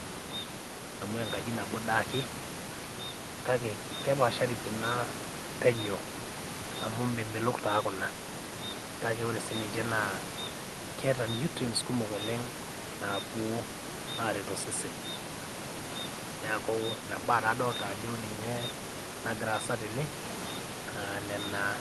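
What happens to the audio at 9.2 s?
Nothing goes wrong at 9.2 s: the speech continues intact, with only the room noise beneath it and the usual band-limited character of the Opus call path.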